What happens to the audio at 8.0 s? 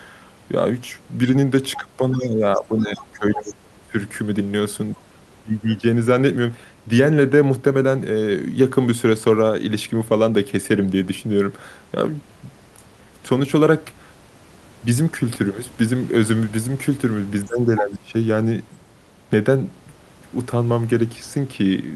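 Nothing goes wrong at 8.0 s; the speech carries on intact there, with only the room's own background noise sitting well beneath it.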